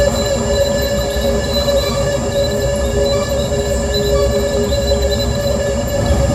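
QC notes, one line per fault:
No faults found in this music.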